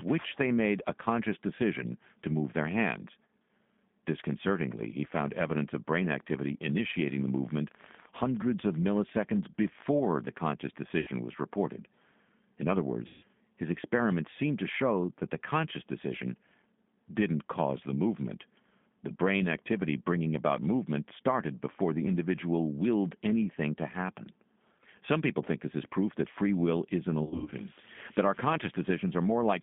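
Speech carried over a G.729 codec link, running at 8 kbit/s. The whole clip is confined to a telephone band of roughly 150 Hz to 3.6 kHz, so the upper harmonics and sibilant energy are simply missing. The codec rebuilds each frame from a vocal-tract filter, a pitch predictor and a handful of excitation pulses, and its damage is plainly audible throughout: a rough, slightly synthetic grain on the voice.

From 5.97 to 9.83 s a train of clicks rides over the audio, around fifty sharp ticks at an average of 14.8 per second but unevenly spaced. The ticks are about as loud as the speech itself and continue through the gaps between phrases. Their uniform shape and sustained run point to a likely source in electrical interference or a faulty connection or power supply rather than anything in the recording.

VoIP packet loss concealed by the speech codec appears three times. At 11.00 to 11.10 s, 70 ms of audio is missing, and at 13.07 to 13.25 s, 160 ms is missing. 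In each gap the decoder stretches its last pitch and filter settings into a buzzy tone or coloured noise that fades. At 27.24 to 27.54 s, 200 ms is lost in bursts scattered across 280 ms, the longest single dropout lasting 90 ms, which gives a stuttering, weakened stretch. Because the decoder's state has to recover, the voice stays weak or distorted briefly after each gap.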